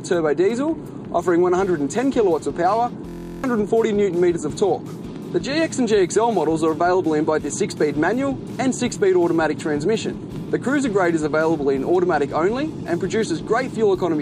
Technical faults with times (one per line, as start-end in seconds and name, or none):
3.09-3.44 system hang loop